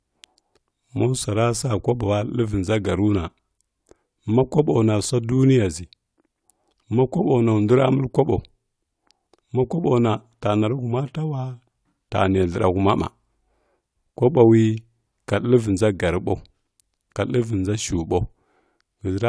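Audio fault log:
Nothing in this speech recording registers as a fault. The log has no timed entries.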